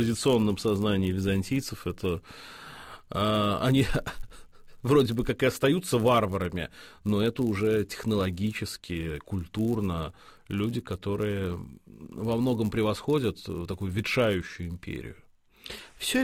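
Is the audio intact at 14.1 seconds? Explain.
No, not quite. At 14.1 seconds you're hearing a filter restarted on every block, and it's there for the whole clip, not just that moment. The filter drops its memory at each block boundary and starts again from silence, so every block opens with a tiny transient. Those land 100 times a second, which points to blocks about 10 ms long, and together they make a steady 100 Hz buzz that rises and falls with the level of the audio.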